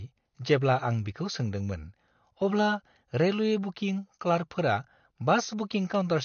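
Throughout, the speech sounds dull and warbly, with nothing above 6.5 kHz. Likely AAC compression, fitting a low bitrate near 32 kbps.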